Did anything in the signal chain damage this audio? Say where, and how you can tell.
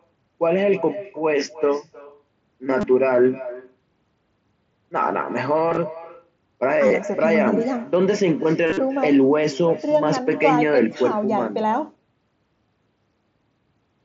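Yes. Throughout the speech, every phrase returns as a quieter, thinner copy about a third of a second later, at about 16 dB below the original. This is echo with no canceller at the call-processing stage. Unlike room reverb, which decays smoothly, it is a distinct delayed repeat.

The headset's Bluetooth link loses packets at 2.81 to 2.83 s, 5.70 to 5.77 s, 6.88 to 6.91 s and 8.67 to 8.77 s, where the longest unbroken run is 45 ms. The gaps are filled rather than silent, which marks this as concealed Bluetooth headset packet loss and not a plain dropout. They carry a brief buzzy held tone with a slight warble as real speech resumes, most audibly at 8.67 s. That buzz is also distinct from the light graininess of the mSBC codec carrying the call.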